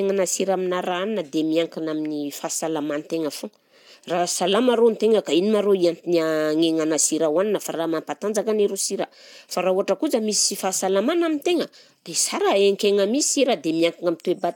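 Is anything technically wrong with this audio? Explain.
No, there is nothing technically wrong with this recording.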